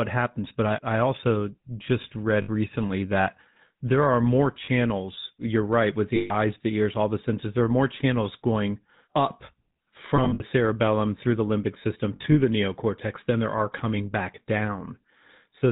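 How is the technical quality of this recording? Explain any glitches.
The recording quality is poor. GSM full-rate coding roughens the whole clip, and lost GSM frames cause five brief glitches.

Throughout, the speech passed through the GSM full-rate codec at 13 kbps. This codec rebuilds the voice from a vocal-tract model driven by sparse, regular pulses, and it discards everything above 4 kHz. The damage is plainly audible: the speech sounds muffled and band-limited, with a buzzy, gravelly grain.

Lost GSM frames occur at five points:
2.42 s to 2.49 s;
4.64 s to 4.69 s, after "that there are more";
6.16 s to 6.31 s, between "you're right with" and "the ears all the";
10.16 s to 10.42 s;
12.16 s to 12.38 s, between "through the limbic system" and "the neocortex than there".
Each time, damaged frames were replaced by the last good frame. Each gap of 40 to 140 ms becomes a rough, metallic ring. 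In the last two, the losses are scattered in short runs rather than one block.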